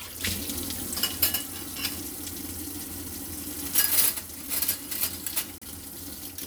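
A digital broadcast dropout hits from 5.58 to 5.63 s. The receiver failed to decode a short stretch of the incoming stream, most likely a single corrupted frame that failed its checksum, so it muted its output until valid data resumed. In the sound this is a brief hole of about 32 ms, entered and left through a very fast fade of roughly 3 ms. The audio drops cleanly to silence, and whatever was broadcast during that instant never comes back.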